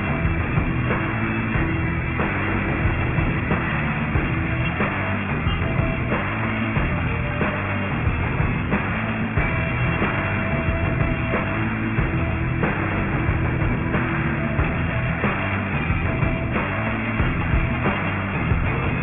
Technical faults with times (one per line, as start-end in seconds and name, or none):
0.00-19.02 aliasing